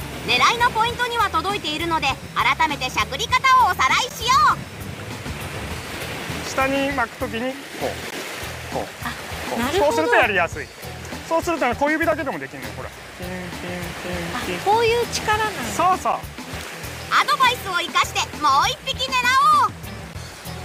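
At 4.09, 8.11, 12.12, 16.13 and 20.13 s, gaps between stream segments leave hard-edged silent holes of 3.5 to 16 ms, one per 4-second segment boundary.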